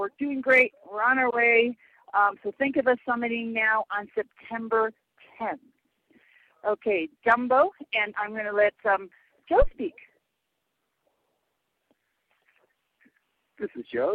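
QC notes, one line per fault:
9.62–9.69 s, phantom power thump. A deep thump peaks at about -12 dBFS and decays within 17 ms. Switching phantom power on a live input pushed a step through the coupling capacitors.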